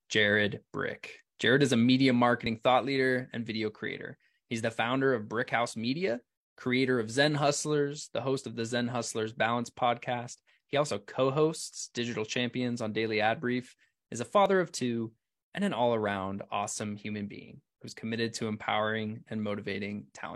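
Overlap between stream segments at 2.47–2.50 s (after "is a media"), 8.44–8.47 s (before "of the") and 14.46–14.50 s (after "is a"), recurring every 6 s: misaligned segment timestamps make the player discard 25 to 42 ms of real audio, so the waveform jumps with a brief skip.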